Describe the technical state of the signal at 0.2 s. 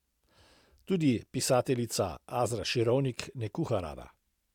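At 0.2 s the speech signal is intact, with no audible fault at that moment.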